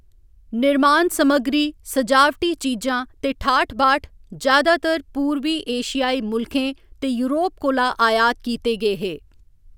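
No technical faults are audible anywhere in this recording.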